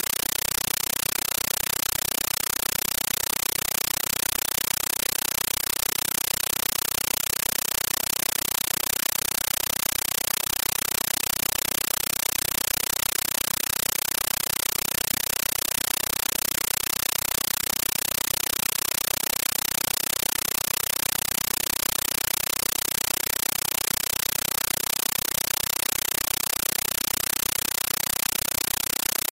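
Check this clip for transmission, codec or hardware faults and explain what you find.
One fault runs through the whole clip. Throughout, the sound is replaced by very loud, chattering static: 9.33 ms noise bursts repeating 31.25 times a second. This is a compressed stream played as audio. An undecoded AC-3 bitstream, consistent with 448 kbps, was taken as samples, so each frame plays as noise followed by silent padding.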